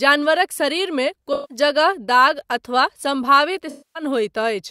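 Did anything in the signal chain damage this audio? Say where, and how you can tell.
Yes, AAC frame loss with concealment at the codec stage: smeared, phasey patches at 1.33–1.57 s, after "जानवरक शरीरमे", and 3.69–4.03 s. Unlike hard dropouts, these gaps are filled from the previous spectrum rather than going silent.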